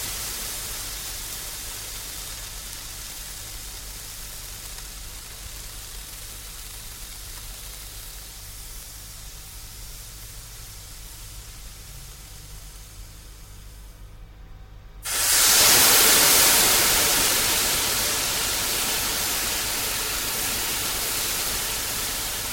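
Nothing stood out as a technical fault on listening to these sounds.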